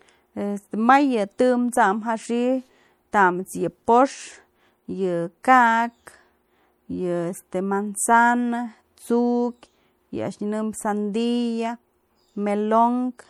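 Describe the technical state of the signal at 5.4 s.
At 5.43 s the transform coder spread quantisation noise across a whole block while a sharp speech attack sat late within it. The noise level set for the loud onset also fills the quiet stretch just before it, so this is pre-echo: a brief hiss of about 14 ms runs ahead of the attack, which lands soft and smeared rather than crisp, as if the onset had been blurred backward in time.

Around that moment, as across the whole speech clip, the sound carries plainly audible damage that is likely from MP3 compression at a data rate consistent with about 64 kbps. With too few bits, the encoder drops weak frequency lines, which flicker on and off between frames, giving a watery, swirling texture and metallic chirps on s sounds. The content stops near 21 kHz.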